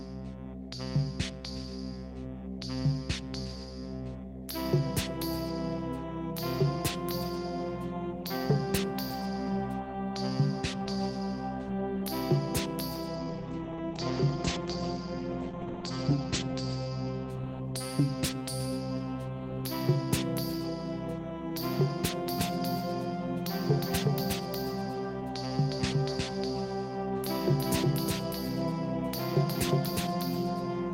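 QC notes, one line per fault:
13.18–17.35 s, call bitrate drop: The encoder's rate falls from 32 kbps to 13 kbps and stays lowest for about 3 s. Coarser coding turns the sound rough and watery. The top end narrows from 20 kHz to 8 kHz, so it also goes muffled.
22.39 s to end, doubled audio track: A second full-band copy enters abruptly around 0.4 s behind, about as loud as the original. It carries no decay or room colour. It is likely a second capture through a slower path, and it continues to the end.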